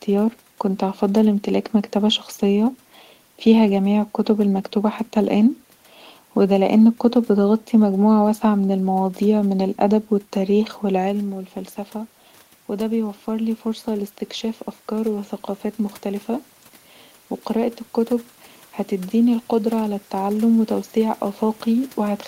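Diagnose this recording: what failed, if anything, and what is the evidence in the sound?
The call-processing stage shows automatic gain rising. After the talker moved away from the microphone around 11 s and the level dropped by about 10 dB, the gain control began lifting its gain at 12.68 s and kept climbing until 22.26 s, adding about 6 dB. The gain acts on everything the microphone picks up, so the room noise swells along with the speech in a slow upward drift rather than a step.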